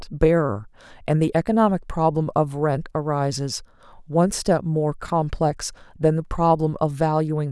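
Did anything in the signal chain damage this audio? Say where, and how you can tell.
Yes. Chunks out of order at 5.06 to 5.1 s, in the buffer: a 20 ms chunk plays one slot late, giving a jumbled moment, yet nothing drops out.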